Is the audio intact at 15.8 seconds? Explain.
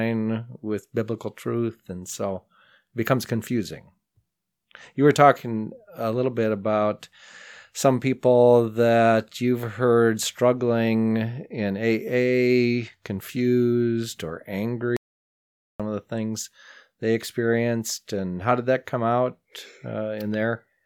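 No. An audio dropout to silence runs from 14.97 to 15.80 s, ending right at that moment. The input was likely lost while recording continued writing silence, so about 0.83 s of speech drops into dead silence with no room tone before resuming abruptly.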